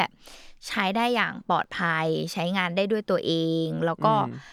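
At 1.64 s the speech drops into a block of digital silence about 5 ms long, where a short run of samples went straight to zero. With no fade in or out, the hard edges make it land as a quick tick rather than an audible gap.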